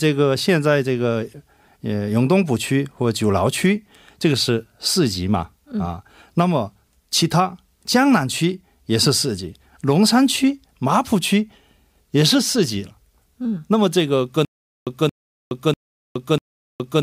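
Speech that, from 14.45 s to the end, falls into a stutter with silent gaps: a 0.23 s fragment repeats four times, each followed by about 0.42 s of digital silence, on an even 0.64 s cycle. The silence between repeats and the steady pace set it apart from a seamless loop or random dropouts, and point to a stalled player or stream likely retrying its last buffer while the audio that should have played is lost.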